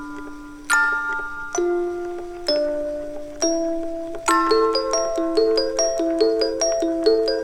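Nothing technical goes wrong anywhere in this sound, so there's nothing here to flag.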